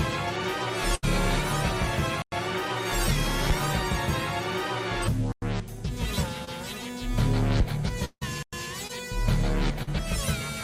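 Right at the start there's a burst of packet loss from about 0.95 to 1.05 s. Packets either got lost or showed up too late, so the receiver papered over roughly 72 ms by stretching the last bit of sound and fading it down. That comes across as a held buzz or a fading hiss. When the audio picks up again it has skipped ahead, and about 80 ms of the original never gets played.

Then at 2.22 to 2.32 s you hit the first gap between chunks, a clean 100 ms hole. The same thing happens at 5.32 to 5.42 s and again at 8.43 to 8.53 s. They land every 3 s, which points to audio being handled in 3 s chunks with silence left at each join. Nothing is actually lost here. The flow just stops briefly at each seam, and the regular spacing gives it away.

At 6.45 to 6.49 s there's a short concealed packet loss. About 20 ms never reached the decoder in time, and roughly 22 ms got filled by continuing the last sound before blending back in. 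You hear it as a quick smear or wobble. A second one shows up at 9.83 to 9.89 s, where 40 ms went missing and 40 ms were filled, so that one is a bit longer.

Between them, from 8.05 to 8.23 s, the sound carries on as a fading continuation for about 163 ms, including roughly 50 ms of silence. After that the audio resumes further along, with around 160 ms gone. That points to a long network dropout as the likely cause. Nothing arrived for that stretch, so the receiver kept the last sound going and let it decay. It sits just ahead of the third chunk gap, so the two faults run almost back to back.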